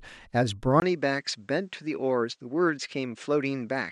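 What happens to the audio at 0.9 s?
At 0.9 s the sound has just turned duller: from 0.8 s to the end, with a brief 20 ms gap at the switch, the input has likely switched to a poorer device. A spectrogram shows nothing above 9.3 kHz, a new faint noise floor, and a waveform a few dB lower.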